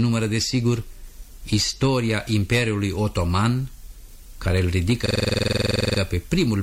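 A system hang loop runs from 5.06 to 5.99 s. The playback system froze while the sound hardware kept replaying the same stretch of its ring buffer. One 46 ms fragment repeats exactly, about 20 times, at 21.5 Hz, which fits a 2048-sample buffer. The result is a rapid, rattling stutter on the edge of a buzz, a frozen slice of sound drilling in place. Normal audio then resumes with little or nothing skipped.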